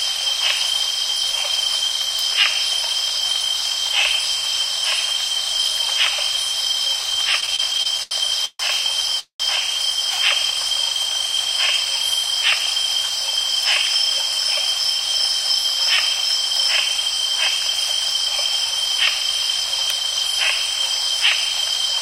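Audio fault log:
7.40–8.61 s, repeated stalls (stutter): ten short gaps, longest 143 ms, about 350 ms filled by extending the last sound. The receive buffer kept emptying, so the sound drags without losing anything.
9.19–9.42 s, call audio freeze: the sound holds and fades for 203 ms, ending in 100 ms of silence, then resumes where it stopped, likely from delayed packets emptying the buffer.
14.99–20.68 s, jitter buffer speed-up: playback runs 1% fast at unchanged pitch as tiny pitch-period slices, around 40 ms in total, are trimmed to reduce buffered delay.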